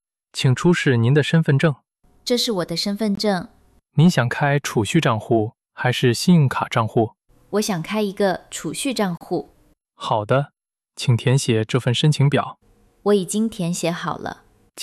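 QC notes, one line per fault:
3.15–3.17 s and 9.17–9.21 s: gap at a join of encoded pieces. Sound drops out for 21.5 ms, then 34.3 ms, six seconds apart. Untrimmed encoder delay and padding leave silence where separately encoded pieces meet.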